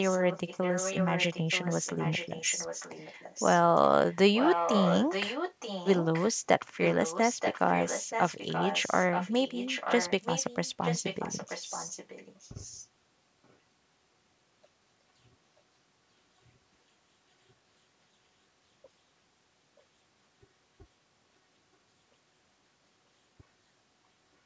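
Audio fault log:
0.04–3.6 s, 4.09–4.16 s, 4.35–6.28 s, 6.8–12.86 s and 13.44–13.56 s: echo leak. A fainter copy of the speech trails the original by about 0.93 s. It is loudest from 4.35 to 6.28 s, roughly 5 dB below the speech, and about 10 dB below through the two longest stretches. At 4.09 and 13.44 s only brief, barely audible scraps come through. The likely cause is a loudspeaker at one end whose echo canceller let part of the returning signal back into the call.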